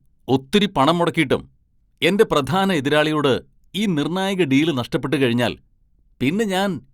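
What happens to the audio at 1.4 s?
Nothing goes wrong at 1.4 s; the speech runs on intact through that moment with no dropout, click, distortion or other fault.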